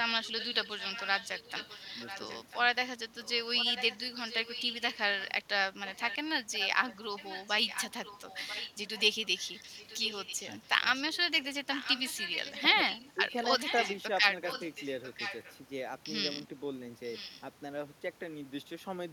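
A fainter copy of the speech trails it by 0.99 s, about 10 dB down, at 0.24–2.58, 3.22–5.42, 5.87–6.16, 6.53–14.02 and 14.47–15.56 s, and about 15 dB down at 17.13–17.42 s. This is echo leak, likely loudspeaker pickup that an echo canceller failed to remove.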